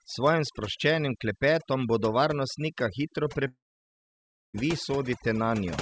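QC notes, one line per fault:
Throughout: overdone noise removal. The suppression is set too strong, so the background drops and breaks up into twinkling specks. Narrow frequency bands close to the noise estimate are pulled down together with quiet parts of the speech.
3.48–4.56 s: long network dropout, likely the cause of this gap. Right after "klepetom bodo varnostnika hitro" the sound is carried on as a short fading buzz, then about 0.96 s of near silence. Speech resumes later, and roughly 1.06 s of audio never returns.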